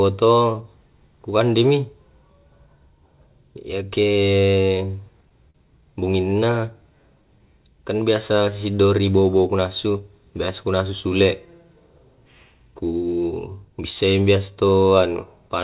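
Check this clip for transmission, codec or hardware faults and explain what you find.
Three jitter-buffer faults affect the speech, all heard through a narrowband call path with nothing above 4 kHz, which fits G.711 mu-law at 64 kbps.

Short stall from a late packet, 5.51 to 5.56 s: a packet arrived late and the jitter buffer ran dry, so the receiver stretched the last sound for 39 ms and then resumed where it left off. Nothing is lost, but the sound is held slightly too long, and the delay grows by 39 ms.

Jitter buffer slow-down, 6.40 to 7.40 s, just before "kan biasa si": the buffer was short of audio, so the receiver repeated single pitch periods over and over, adding 50 ms in total. The speech plays at 96% speed with unchanged pitch and sounds slightly drawn out.

Jitter buffer speed-up, 9.61 to 10.01 s: the buffer held more audio than its target, so the receiver cut out short pitch-period pieces in succession, removing about 40 ms. 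The speech runs at 108% speed with unchanged pitch and sounds briefly hurried.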